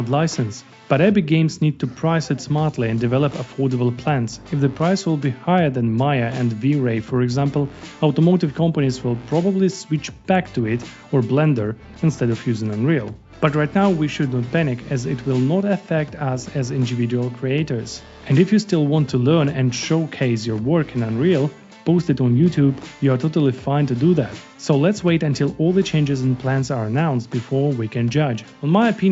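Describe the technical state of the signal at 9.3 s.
At 9.3 s the audio is intact, with no fault present, only the normal band limit near 8 kHz from the call microphone processing and the WebRTC call path.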